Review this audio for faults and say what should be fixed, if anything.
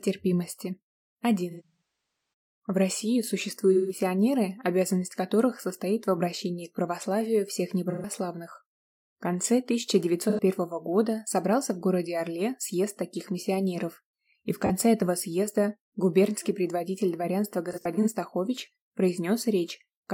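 AAC frame loss with concealment: the stream dropped AAC frames, and the decoder rebuilt the gaps from the last good spectrum, leaving smeared, noisy, phasey patches at 1.5 to 1.81 s (about 640 ms missing across 850 ms, longest run around 200 ms), 3.72 to 4.0 s, and 10.29 to 10.41 s. Prevent it by adding forward error correction or retransmission, and a larger jitter buffer, on the transport link.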